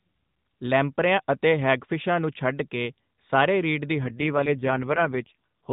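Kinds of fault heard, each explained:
AMR rate drop: From 4.04 s to the end, the mobile codec falls to a lower mode, from what sounds like 12.2 kbps to about 4.75 kbps, so the speech turns rougher and more synthetic. The band stays capped near 4 kHz with no gap, while the spectrogram's harmonic detail smears into coarser, buzzier texture.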